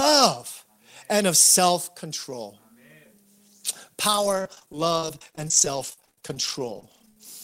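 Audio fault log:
4.07–7.24 s, repeated packet loss (robotic sound): dozens of brief dropouts, the longest 42 ms, are patched by stretching the preceding sound, leaving choppy speech with pieces missing. The spectrogram shows smeared, repeated frames and small holes. The waveform shows clipped-off, duplicated cycles.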